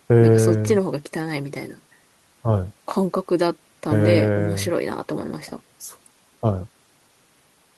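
No technical faults can be heard in this recording.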